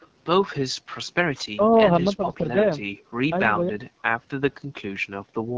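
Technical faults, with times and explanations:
Throughout: AMR wideband (HD Voice) codec at 8.85 kbit/s, the second-lowest rate of AMR-WB. At this rate the pulse-driven vocal tract model has too few bits to shape the excitation, so the speech sounds rough and raspy, with a noise-filled top band from 6.4 to 7 kHz.
0.00 to 0.07 s: echo leak. A faint copy of the far side's voice, delayed by 272 ms and roughly 35 dB below the speech, is heard briefly. It was likely loudspeaker sound that the echo canceller failed to remove before sending it back.
1.23 to 1.72 s, 2.14 to 2.87 s and 3.51 to 4.05 s: speech suppressed in double talk. The talker's voice dips by around 40 dB, then about 15 dB, then about 40 dB again, each time for a few hundred milliseconds. This is likely the echo canceller turning down the whole signal because both sides were talking at once.
3.15 to 3.20 s and 4.61 s to the end: background gated by the echo canceller. 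The room sound drops by about 40 dB, first for about 50 ms and then for about half a second in total. The canceller clamped the microphone while the loudspeaker played, so the background vanishes until it lets go.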